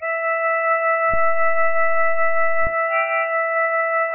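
The whole piece sounds watery and swirly, with nothing above about 2.9 kHz, likely heavy MP3 compression, the dull top pointing to a very low bitrate around 8 kbps. At 1.14 s there's a DC step: the waveform's zero line jumps, giving a low thump, and the offset lasts until 2.67 s.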